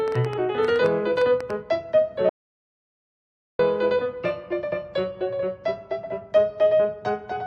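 From 0.08 to 1.51 s a train of clicks, about fifteen uneven pops at roughly 8.4 per second, ticks about 5 dB above the sound. The matching shapes point to likely interference rather than random crackle.

From 2.29 to 3.59 s an audio dropout to silence cuts out 1.3 s. Unlike a quiet pause, no room tone remains, pointing to a likely lost input.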